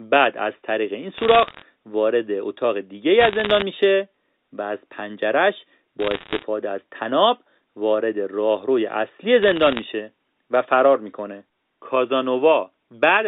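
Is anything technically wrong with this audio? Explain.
Yes. Bit errors on a digital phone line crackle through this speech at 1.18–1.62 s, 3.20–3.62 s, 6.00–6.43 s and 9.43–9.84 s. Roughly one bit in every 100 to 200 flips, each spoiling a single sample, and sign or high-bit hits snap as sharp ticks. Unlike packet loss, nothing drops out: the speech continues unbroken beneath the crackle.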